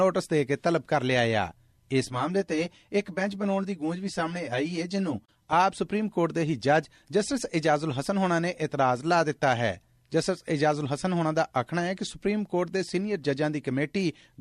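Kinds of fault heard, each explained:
Channel delay (comb filtering): From about 2.05 to 5.53 s, one channel lags the other by roughly 10 ms before the mono sum. Cancellation carves evenly spaced notches starting near 50 Hz. The result is a hollow, phasey tone, not the broadband dullness of simple low-pass muffling.
Digital broadcast dropout: At about 5.25 to 5.29 s, the sound fades out over about 8 ms and leaves a 24 ms hole, which fits a single lost frame. Unlike a click or an analogue fade, it is a clean mute, and what was sent during it never returns.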